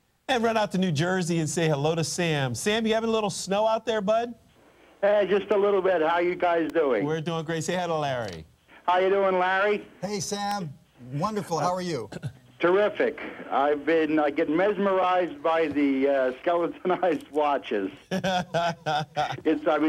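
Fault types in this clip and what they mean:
Electrical switching spike: two sharp snaps at 6.70 and 10.51 s, the second louder, likely from a nearby switch or static arc picked up by the audio line.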